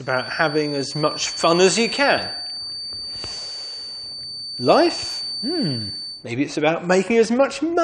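Right from the start, 0.0 s, there's a feedback whistle sitting behind the sound: a thin, steady tone at 4.6 kHz, roughly ten dB under the main signal, wobbling a bit in level. It hangs on until 6.28 s, then drops away. The likely cause is a speaker-to-mic loop balanced just on the edge of feedback, so that one frequency keeps ringing without ever building up into a full howl.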